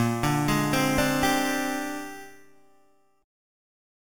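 Sample-and-hold upsampling repeated each sample with no smoothing filter, and the resulting imaging runs throughout: a mirrored spectral copy fills about 4 to 8 kHz at about 13 dB below the sound, adding a metallic fizz, consistent with 8 kHz audio raised to 48 kHz.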